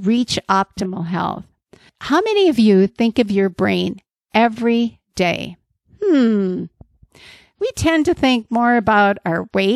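At 0.77 to 0.86 s the speech is interrupted by a corrupt frame decoded: a single damaged compressed frame was played with misread gains and codes, putting energy at wrong frequencies and producing a brief, fairly loud glitch peaking around -10 dBFS.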